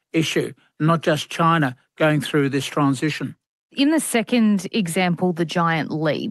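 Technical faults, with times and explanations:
No technical faults are present; the speech comes through a WebRTC call path whose audible top end stops at 12 kHz, which fits an Opus stream at around 32 kbps.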